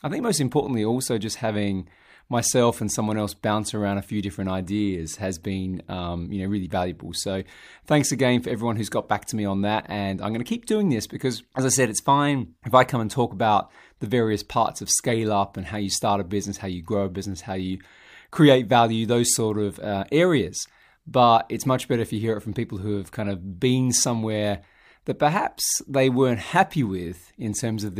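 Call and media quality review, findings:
No faults found on review of the speech recording. No action required.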